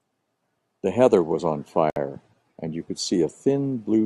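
At 1.90 s the speech drops out for about 61 ms, a short hole with smeared edges, before the sound resumes at 1.96 s exactly where it stopped. This is a gap at a join of encoded pieces: the audio was encoded in separate chunks, here about 2 s long, and spliced without trimming, so the encoder's start-up delay and the padding of the previous chunk's final frame both remain as silence in the middle of the speech.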